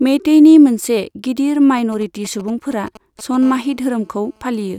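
From 1.78 s to 3.44 s, just after "मेइतेइनि मोनसे गिदिर", GSM signalling bursts break into the speech. A 2G phone nearby is sending short groups of radio bursts, as it does while signalling. The audio circuit rectifies them into sound. The result is a galloping dit-dit-dit of ticks and brief buzzes at 217 Hz. It sits roughly 20 dB below the speech. It has no link to what is being said.

At 3.45 s it becomes a continuous GSM phone buzz, lasting to 4.74 s. The phone has moved into a call and now transmits steadily, 217 times a second. Each radio pulse is again rectified by the audio circuit. This gives a hard, raspy buzz at 217 Hz, rich in harmonics. It is steady, not broken into groups. It lies about 31 dB below the speech, quieter than the bursts before it.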